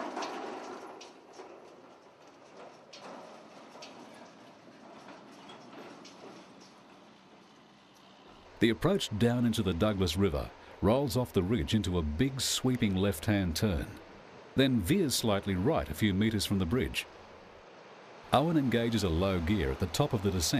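From 18.3 s to the end, the audio takes on a hiss-like roughness that tracks the sound itself, growing with louder and brighter material rather than sitting as a steady floor. This is sample clock jitter: the converter's clock wanders, so each sample is taken a little early or late at random, on the order of 4 microseconds. Steep, fast-changing parts of the waveform suffer most, leaving an error roughly 30 dB below the signal.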